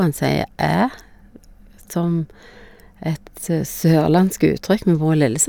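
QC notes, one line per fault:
No faults were heard in this speech clip. Nothing in it calls for a QC note.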